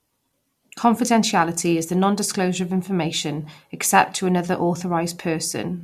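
No technical faults are audible anywhere in the speech.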